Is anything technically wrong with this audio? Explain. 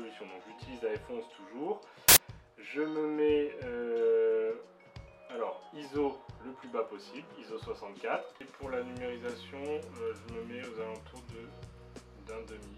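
Yes. From 2.09 to 2.17 s, samples are built from the wrong bytes. Misordered bytes turn fast-changing low bits into large values, producing a burst of loud, harsh broadband noise.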